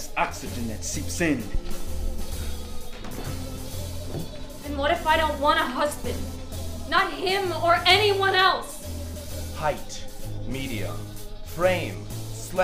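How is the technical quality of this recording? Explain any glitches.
Nothing here sounds glitchy at all; the recording holds steady the whole way with no audible technical problems.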